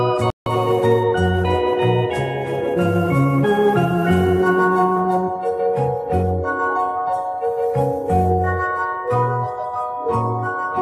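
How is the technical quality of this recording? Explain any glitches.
One glitch stands out, a digital broadcast dropout from 0.30 to 0.47 s. The receiver stopped getting valid frames and muted, losing about 160 ms of programme, which fits five lost frames. It sounds like a brief hole. A waveform shows a flat gap, and a spectrogram shows a blank vertical band across all frequencies.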